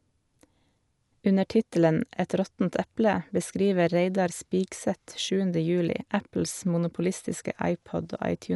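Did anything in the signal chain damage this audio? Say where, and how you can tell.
Yes, at the codec stage, and it runs the whole clip: the speech sounds dull with nothing above 11.5 kHz, plus a rough, fluttering hiss around voiced tones. That's likely Dolby Digital compression at a starved rate, which fits about 64 kbps: unfunded bands are filled with dither noise.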